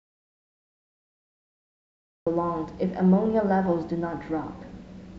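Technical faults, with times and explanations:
0.00 to 2.27 s, audio dropout to silence: the clip opens in silence with no room tone, and speech cuts in abruptly at 2.27 s. The input was likely lost or muted while the recorder kept writing silence, so whatever preceded it is gone.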